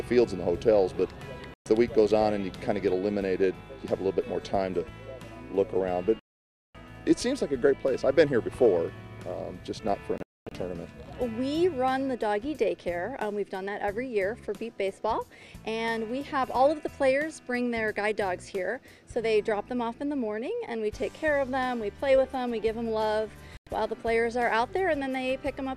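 A digital broadcast dropout mutes the audio four times, at 1.54–1.66 s, 6.19–6.75 s, 10.18–10.52 s (several short holes, the longest about 0.24 s) and 23.57–23.67 s, as the receiver silences corrupted frames. The spectrogram shows full-band blank columns, and the waveform drops to a flat line.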